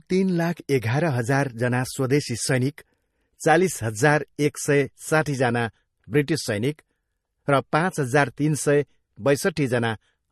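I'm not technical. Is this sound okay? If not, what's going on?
No. From start to finish the speech has a watery, swirling quality, with the hiss of s sounds turning metallic and the starts of sounds smeared. There is also nothing at all above 12.6 kHz, so the top end sounds cut off. This is likely MP3 compression at a low setting: the encoder dropped the highest treble entirely and kept switching faint details on and off, which produces that bubbling texture.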